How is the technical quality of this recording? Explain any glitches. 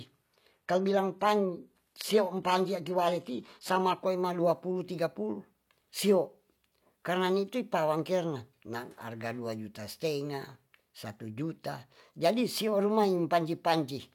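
The recording has one quality problem, confined to its opening. An adaptive stream starting at a low bitrate affects the speech from 0 to 4.0 s. The player began on a thin version of the stream for a fast start, then switched to a better one once it had measured the connection. Until 4.0 s the treble sounds synthetic and compression artefacts are strong, which fits HE-AAC at about 20 kbit/s. Quality then jumps abruptly, without a gap, to something like AAC-LC at 96 kbit/s, with nothing above 14.9 kHz.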